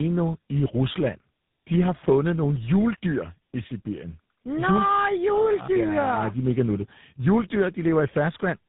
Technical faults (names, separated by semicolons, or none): tandem speech coding